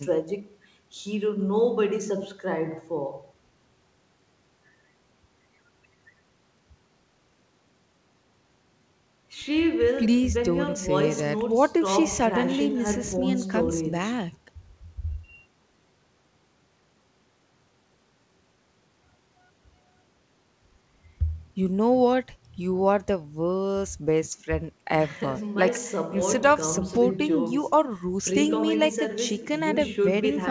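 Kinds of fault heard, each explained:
The speech comes through a normally working WebRTC call path, and its wideband G.722-style coding leaves nothing above 8 kHz, with no faults to be heard.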